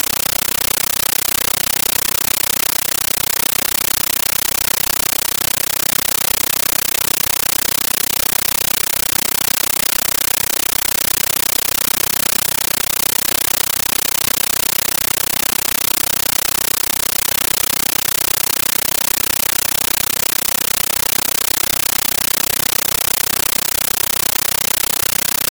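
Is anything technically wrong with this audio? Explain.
Yes. A compressed stream played as audio runs throughout the clip: an AC-3 (Dolby Digital) bitstream was treated as ordinary PCM samples instead of being decoded. Each encoded frame comes out as a burst of noise about 13.3 ms long, followed by silent padding, repeating 31.25 times a second. In place of the speech there is a harsh, very loud chattering static, a buzzy flutter at that frame rate. The burst density fits a high-bitrate AC-3 stream.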